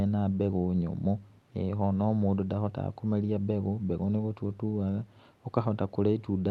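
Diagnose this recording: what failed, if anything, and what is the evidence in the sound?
Nothing failed in this recording.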